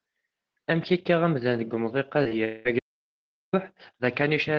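Two short concealed packet losses come first, at 2.23–2.27 s and 2.29–2.33 s, each around 20 ms of missing audio. The receiver bridged each hole by extending the preceding sound and crossfading back into the real signal, so each one registers as a quick smear or wobble in the speech. On a spectrogram, the harmonics blur into a short smudge; the waveform shows a slightly repeated, smoothed cycle pattern.

From 2.45 to 2.67 s comes a long network dropout, the likely cause of a 200 ms stretch in which nothing real was played. The decoder filled all of it by carrying the last sound forward as a fading buzz or hiss that never quite reaches silence before the true audio resumes. On a spectrogram, the last spectrum freezes in place and dims toward the right; the waveform shows a decaying tail instead of natural speech movement.

Then, at 2.79 s, the speech cuts out mid-flow into an audio dropout to silence that lasts about 0.74 s, to 3.53 s, likely from the input being lost while the recorder kept writing silence. 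Unlike the earlier gaps, nothing fills it: even the background room tone vanishes. It appears as a flat, near-silent line in the waveform and a fully blank column on the spectrogram, with hard edges where the sound stops and abruptly returns.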